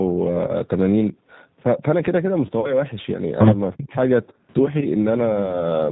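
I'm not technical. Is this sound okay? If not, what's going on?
No. G.729 codec, throughout: the speech was squeezed by a low-rate phone-call codec that rebuilds the voice from a simple model of the throat and pitch, so everything sounds somewhat rough and artificial, and nothing above 4 kHz remains.

VoIP packet loss concealed by the speech codec, at 0.47–0.55 s, 2.60–2.80 s and 4.80–4.87 s: small pieces of the call went missing in transit, 20 ms at the first and last, 40 ms in the middle. The decoder filled each gap by stretching the last sound into a fading tone or noise, and the voice stays weak briefly afterwards.

Speech suppressed in double talk, at 3.76–3.93 s: the voice drops sharply for a fraction of a second. The likely cause is the call's echo control mistaking both people talking at once for echo and turning the sound down.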